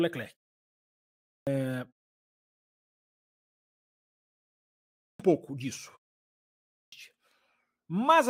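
Clipped start after a pause occurs at 1.01 s, 3.44 s, 4.72 s and 6.42 s, each time just after silence lasting 0.73, 1.6, 0.93 and 0.53 s. The output device powers down during the gap and needs time to wake and relock, swallowing about 0.46, 0.51, 0.48 and 0.50 s of speech. Each phrase bursts in abruptly without its opening, including right before "pouco disso" and again after it, while the pauses themselves fall cleanly silent.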